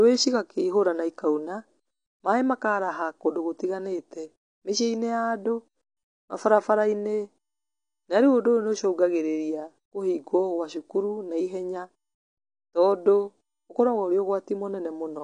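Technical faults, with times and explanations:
Throughout, AAC compression: clearly audible codec damage dulls the speech, likely from AAC-LC near 32 kbps; a spectrogram shows nothing above 9.8 kHz.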